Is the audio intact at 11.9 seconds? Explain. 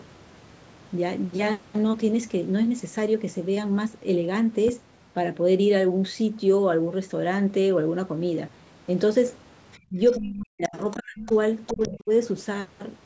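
No. From 11.67 to 11.89 s, the echo canceller likely failed to remove all of the far end's loudspeaker sound from the microphone, so the other side's voice is leaking through: a faint second voice sitting well below the talker, ending right around 11.9 s.

At the same moment, speech is suppressed in double talk from 11.72 to 12.11 s. With both sides talking, the canceller likely could not tell its own talker from the echo and turned everything down. The talker's voice drops sharply and deeply for a few hundred milliseconds.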